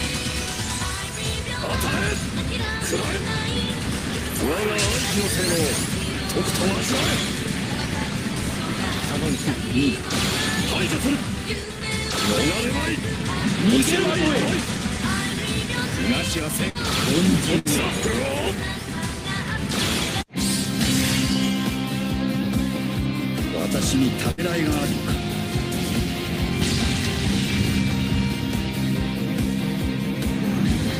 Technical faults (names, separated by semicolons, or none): burst of packet loss